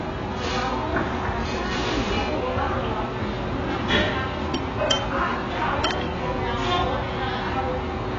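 From start to finish the sound is dull and smeared, with nothing above about 7.5 kHz and a warbling, fizzy texture on sustained and noisy parts. The likely cause is heavy AAC compression, with the AAC-LC coder starved of bits in a way that points to a bitrate around 12 kbps. It lowered its cut-off and quantised the remaining frequency lines too coarsely to hold steady from frame to frame.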